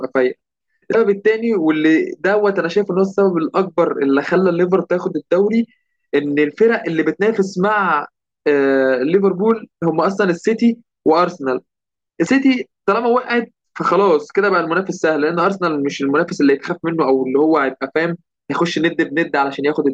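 At 0.90 s and again at 12.23 s, each lasting about 50 ms, the speech is interrupted by a short glitch caused by damaged data in the compressed stream. Some bytes of the encoded frames arrive corrupted, so the decoder either misreads them or discards them, loses frame sync, and scans forward for the next valid header. The garbled output during that resync is what produces the brief glitch in place of the speech.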